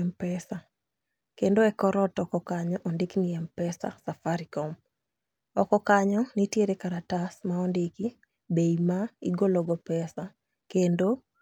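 No technical faults are audible.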